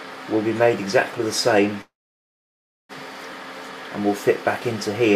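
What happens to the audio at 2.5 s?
At 2.5 s you're inside a call audio freeze, 1.81 to 2.92 s: likely a starved jitter buffer, so the sound fades to silence, then resumes unharmed, just about 1.1 s late.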